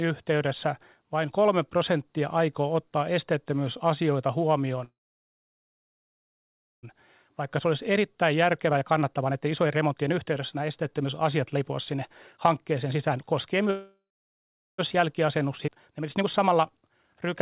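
At 4.84 s the speech stops and a call audio freeze holds for about 2.0 s, to 6.85 s. The last sound carries briefly as a decaying fill before nearly 1.9 s of silence, and speech then resumes exactly where it broke off with nothing lost. The likely cause is delayed packets draining the jitter buffer, so the whole stream now runs about 2 s later than before.

From 7.29 s to 13.70 s a jitter buffer speed-up follows. Playback runs at about 117% of normal speed with unchanged pitch, and the speech sounds noticeably rushed. The receiver is trimming short pitch-period slices over and over to work off the built-up delay, and roughly a second of audio disappears across this stretch.

A second call audio freeze begins at 13.71 s and lasts about 1.1 s, to 14.80 s. A short fill gives way to roughly 0.77 s of silence, and again the speech resumes without loss, adding about 1.1 s of delay.

A second speed-up runs from 14.94 s to 17.28 s at about 120%, removing around half a second. 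Inside it, at 15.67–15.69 s, a skip ahead drops roughly a second of speech. The join is almost seamless, with only a few milliseconds of fill, so the speech jumps straight to later material.

Throughout, the sound is band-limited to 4 kHz, which fits a narrowband G.711 mu-law call path.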